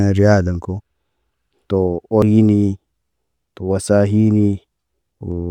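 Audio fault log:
2.22–2.26 s, damaged data in a compressed stream: a short burst of corruption lasting about 30 ms cuts into the speech as a brief chirp, squawk, click or short hole. Bytes in that stretch of the compressed stream were wrong or missing, so the decoder misread the affected frame data, lost its place in the bitstream, and produced garbled output until it found a valid frame header and resumed normal decoding.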